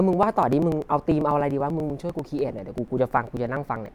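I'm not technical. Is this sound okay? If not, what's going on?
No. From 0.13 s to 3.86 s there are periodic USB or driver dropouts: a background task blocks the USB connection or audio driver about every 0.1 s, roughly ten times a second, and a couple of milliseconds of the speech are skipped each time, about forty cuts in all. You hear a steady ticking under the speech that goes quiet during pauses. Crackle from a loose cable is uneven, but these ticks keep an exact, clock-like rhythm.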